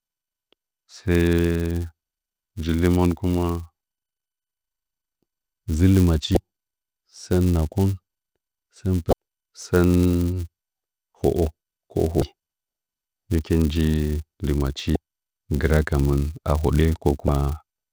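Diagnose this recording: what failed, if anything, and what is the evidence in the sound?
A steady buzz at 188 Hz runs under the speech throughout, rising and falling with its level. That points to a filter restarted on every block in the processing buffer stage, fitting 256-sample blocks at 48 kHz, each block starting from zero state. Unlike mains hum, it vanishes when the signal does.

Five short glitches, each about 30 ms, occur at 6.34 s after "dzɨ lɨ", 9.10 s, 12.19 s after "holo ka", 14.93 s after "hɨkin nji lɨmachi", and 17.26 s. This is damaged data in a compressed stream at the codec or storage stage. The decoder misreads frames and loses sync.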